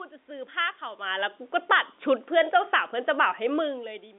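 At 1.56 s the automatic gain falling: the gain control judges the input too loud, or its background noise too strong, and pulls its gain down by about 3 dB over roughly 0.3 s, finishing near 1.87 s. Voice and room noise sink together, which separates it from the talker simply moving away, where only the voice would drop. On a waveform the envelope tapers smoothly across that stretch; on a spectrogram every band, the noise floor included, dims evenly at once.

Automatic gain rising overlaps the end of that dip, starting at 1.78 s and running to 2.14 s. The control now hears the input as too quiet and lifts its gain by about 3 dB, so speech and background swell back up together over about a third of a second. The waveform shows the envelope climbing again in a gentle ramp right after the taper, giving a shallow V-shaped notch. The spectrogram brightens uniformly across the telephone band, which the G.711 coding limits to roughly 250 Hz to 3.6 kHz, with the room noise rising alongside the voice.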